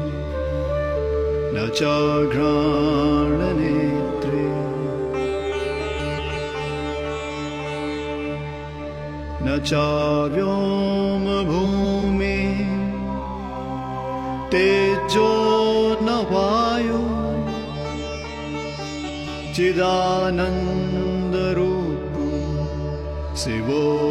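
At 5.98–6.36 s, 11.65–12.04 s and 19.08–19.47 s, frames out of order: two adjacent 0.19 s blocks play swapped, giving a garbled flutter, visible as waveform and spectrogram discontinuities.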